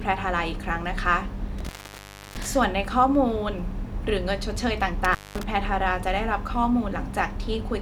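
Intermittent contact at 1.59 to 2.46 s and 5.05 to 5.43 s: a loose connection briefly opens, dropping the speech for 0.67 s then 0.21 s, with crackle at each break.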